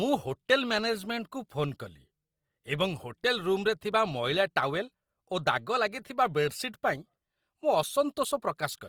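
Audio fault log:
throughout Opus compression: the encoder, likely Opus in its CELT music mode at a rate that fits about 24 kbps, runs short of bits and fills starved bands with folded or noise-like content, so the speech turns plainly grainy and rough while still reaching 20.2 kHz.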